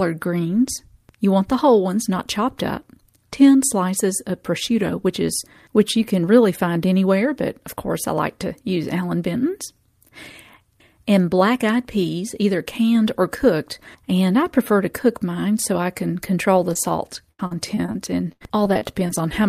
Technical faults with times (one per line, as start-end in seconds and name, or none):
16.73-16.77 short concealed packet loss
17.31-17.96 repeated packet loss (robotic sound)
18.32-19.11 repeated packet loss (robotic sound)